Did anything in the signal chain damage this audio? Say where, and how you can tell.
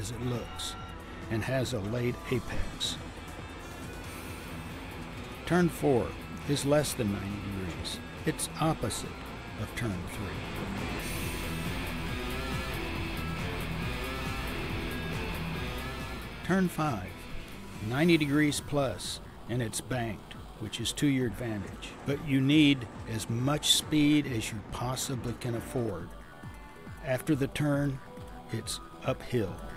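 No, nothing along the way from capture to playback left any mark I can hear on this one.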